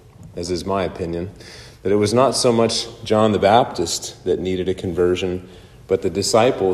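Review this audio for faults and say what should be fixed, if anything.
Nothing to fix: no audible defects anywhere in the recording.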